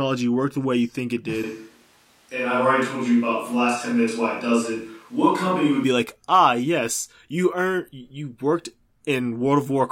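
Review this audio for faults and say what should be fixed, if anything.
From 1.44 to 5.84 s, after "way you think it" until "like ah yes you", there is a switch to a distant microphone: the sound turns suddenly roomy and bass-light, likely because the close-mic feed dropped out. Monitor the close microphone's feed during recording, and check its connection and power so that it never falls back to the distant source.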